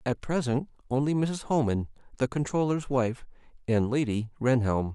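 No technical faults are audible anywhere in the speech recording.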